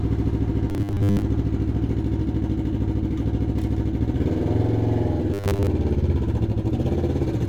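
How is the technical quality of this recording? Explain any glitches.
Two short glitches show robotic sound from repeated short buffers, at 0.70 to 1.22 s and 5.34 to 5.67 s. Most of each stretch likely repeats a 10 ms slice, forcing a rigid, metallic 100 Hz buzz.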